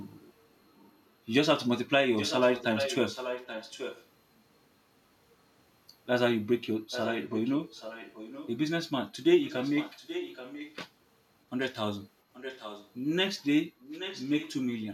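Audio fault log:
0.65–1.02 s, 2.17–4.07 s, 6.91–8.51 s, 9.44–10.76 s, 12.33–12.91 s and 13.81–14.53 s, echo leak: a second copy of the speech trails the original by a fixed 830 ms. It is barely audible in the first stretch, about 35 dB down, and plainly audible in the rest, about 10 to 15 dB below the direct voice. The steady delay points to a loudspeaker path at one end whose echo canceller is likely failing to remove the picked-up signal, so that remnant is sent back.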